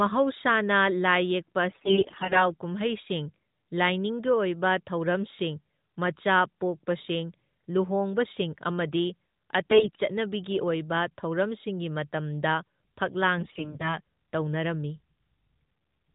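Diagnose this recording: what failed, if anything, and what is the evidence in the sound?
The fault is AMR bit errors at the network stage. From 1.70 to 2.46 s, 9.70 to 9.96 s and 13.38 to 13.97 s the speech turns hoarse, scratchy and gargly. Pitch and level hold. Flipped low-priority bits misplace the excitation pulses and skew the fine gain and spectrum values.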